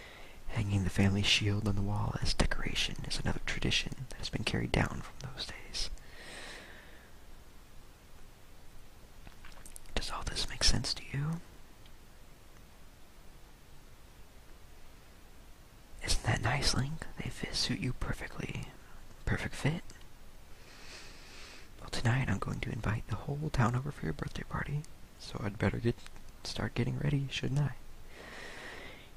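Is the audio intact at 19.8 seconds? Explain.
Yes, the audio is intact at 19.8 seconds, with no dropout, click, distortion or other fault audible at that moment.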